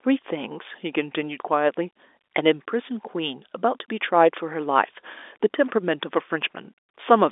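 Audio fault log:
No faults detected.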